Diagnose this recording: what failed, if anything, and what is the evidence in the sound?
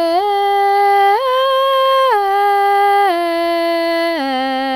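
Nothing in this music recording points to a failure at any stage of the chain, from wiring and conversion through to playback.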